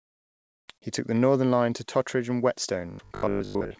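From the start to 0.68 s, the real room background is replaced by comfort noise: a smooth, featureless hiss about 30 dB quieter than the background it stands in for. The likely cause is discontinuous transmission, where the sender goes quiet during the pause and the receiver synthesises shaped noise. On a spectrogram this stretch is a flat, uniform wash with no texture or transient events. The waveform is a thin, even band that steps up when real audio returns.

From 2.91 to 3.79 s the speech turns into a rigid, metallic buzz that still loosely tracks the syllables. This is robotic sound from repeated short buffers: most of that stretch is built from copies of the last 20 ms of audio, likely because new audio arrived too late, and those repeats impose a fixed 50 Hz pitch. A spectrogram shows evenly spaced horizontal harmonic lines at multiples of 50 Hz, cut off above 7 kHz by the call codec's band limit. 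The waveform shows a near-identical short cycle repeating over and over.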